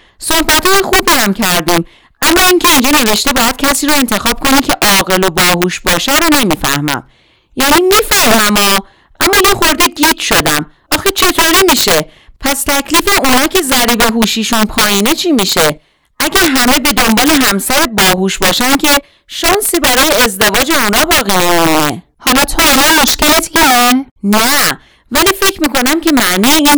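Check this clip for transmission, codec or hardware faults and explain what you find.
Violent, sharp cracks burst out of the louder passages of this speech all the way through, far harsher than ordinary clipping distortion. The fault is integer overflow. The signal is driven about 7 dB past the top of the integer range, and instead of being held at the limit, each peak wraps around to the opposite extreme. Roughly one sample in fifteen ends up on the wrong side of the scale, so every loud stretch snaps with full-range jumps.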